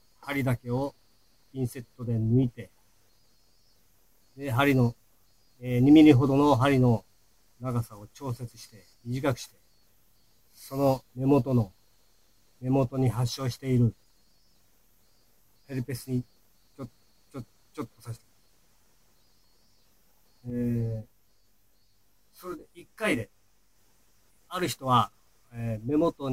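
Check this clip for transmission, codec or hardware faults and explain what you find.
One fault is present: channel delay (comb filtering), from 20.5 to 23.76 s. One channel arrives around 20 ms behind the other, and when the two are summed to mono, shared content cancels at evenly spaced frequencies, with the first notch near 30 Hz and the rest packed closely above it. At a delay this long the result sounds rough or slightly doubled. Unlike flanging, the notches stay fixed, and unlike a distinct echo, the copy does not come back as a separate repeat.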